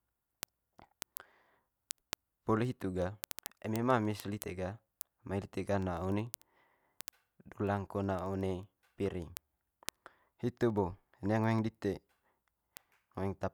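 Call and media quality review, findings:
Word clock ticks, 0.14–13.51 s: sharp ticks roughly every 70 ms through the speech. An unlocked digital receiver drops or repeats one sample per slip, consistent with roughly 300 ppm clock mismatch.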